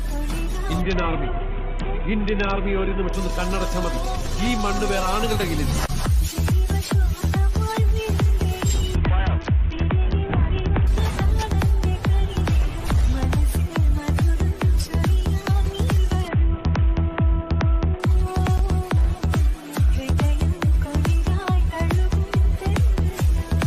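At 0.81 to 3.13 s, 8.95 to 10.87 s and 16.28 to 18.00 s the audio shows a Bluetooth SBC bit pool drop. In each stretch the treble goes dull and a gritty noise rises, which fits the encoder falling from a bit pool of 28 to about 6, near 60 kbps, on a congested link. Too few bits reach the top sub-bands, and the rest are coarsely quantised until the rate recovers.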